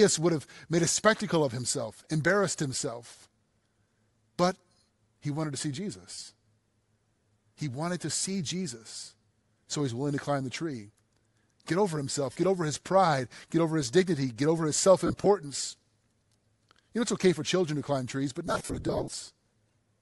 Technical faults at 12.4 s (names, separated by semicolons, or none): Bluetooth LC3 compression; lost LE Audio frames